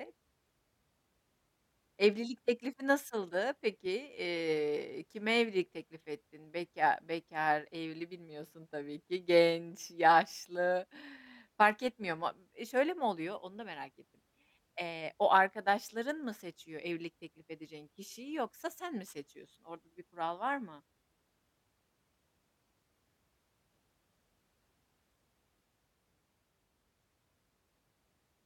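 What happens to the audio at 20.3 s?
Nothing goes wrong at 20.3 s; the speech there plays through intact, with no dropout, click, distortion or other fault.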